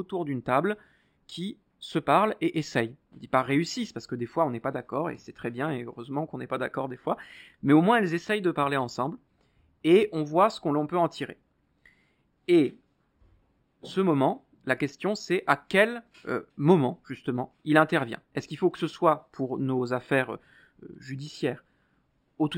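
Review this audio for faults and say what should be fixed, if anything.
Imaging from linear upsampling runs through the whole recording: speech raised from 12 kHz to 44.1 kHz by straight-line interpolation dulls the top and leaves a mirrored image between 6 and 12 kHz, roughly 30 dB down. That gives sibilants a faint metallic shimmer. Unlike aliasing, the extra content mirrors real energy above the original band edge rather than folding down into it. Prevent this by resampling with a proper windowed-sinc or polyphase low-pass filter instead of linear interpolation.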